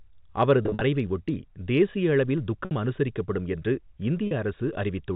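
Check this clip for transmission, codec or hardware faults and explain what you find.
Three dropouts in this speech clip show packet loss with pitch repetition. They occur at 0.63–0.81 s, just before "ஒட்டி தேசிய அளவில்", at 2.65–2.71 s, just before "அனுசரிக்கப்படும் என்று", and at 4.27–4.31 s, right after it. The receiver loops the last pitch period to fill each gap, giving a brief buzzy, held tone. On a spectrogram that appears as flat, unchanging harmonic stripes, and the waveform shows identical repeated cycles. The first event scatters short losses across 180 ms, with runs up to 50 ms. The narrowband G.711 telephone coding can be heard throughout.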